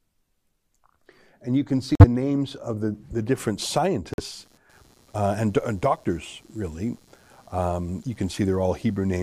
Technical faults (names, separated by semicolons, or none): corrupt frame muted; computer activity noise